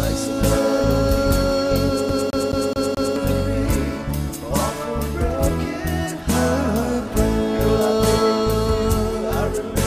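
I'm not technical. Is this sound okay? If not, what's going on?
No. From about 2.09 to 3.16 seconds the audio gets caught in a loop: the same short piece, about 0.21 seconds long, plays five times in a row, with a tiny gap at each jump. This is a CD stuck on one turn: a scratch knocks the laser back one track every time the disc comes round. Unlike a dropout, nothing goes missing; the sound repeats in a quick, perfectly even stutter.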